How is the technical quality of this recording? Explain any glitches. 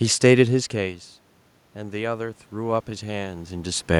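The recording has one technical glitch, an automatic gain rise, heard over the room noise. From 1.76 s to 3.92 s the automatic gain control is rising. The input level drops by about 16 dB. The control reads this as too quiet and slowly turns its gain up by about 5 dB. Because it amplifies everything, the speech and the room noise swell together. The lift is gradual, spread over about two seconds. Moments where the talker moves nearer or farther from the microphone also shift the level, but those are natural.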